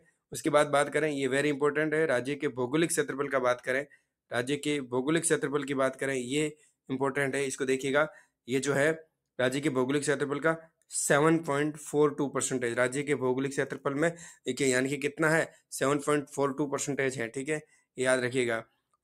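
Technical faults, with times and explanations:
Throughout: noise suppressor applied to music or sounds. The level keeps pumping and thinning, swinging by roughly 5 dB, with held parts sinking while attacks stay up. A speech-oriented suppressor is treating steady content and decay as noise and pulling it down.
0.00–0.33, 3.85–4.06, 6.55–6.70, 17.62–17.98 and 18.64–18.95 s: sound cut by the noise suppressor. Each stretch briefly drops away, by about 21, 19, 11, 15 and 17 dB respectively, for a fifth of a second or less. The suppressor judged these passages to be noise and clamped them hard.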